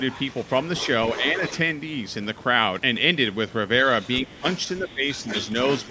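From 0.08 to 0.88 s and 1.04 to 1.58 s a second, fainter voice sits about 15 dB under the speech. That is the other side's voice leaking through, likely because loudspeaker echo survived cancellation. It returns at 3.82 to 4.94 s, about 20 dB down, and from 5.1 s to the end. It is a separate talker, not a smeared room tail. Within that overlap, the talker's speech drops at 4.24 to 4.45 s (about 20 dB at its deepest) and at 4.8 to 5.02 s (about 10 dB). This is speech suppressed in double talk, likely the canceller ducking both voices. Unlike a network dropout, these dips coincide with the far voice and stay partial. The band stops near 8 kHz, consistent with call microphone processing.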